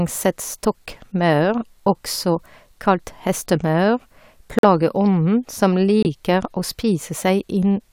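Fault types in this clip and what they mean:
Corrupt frame muted: flipped bits spoiled a few compressed frames, so the decoder rejected them and the player filled in silence. The speech drops out abruptly for about 60 ms at 4.59 s and about 36 ms at 6.03 s, with the timing unchanged.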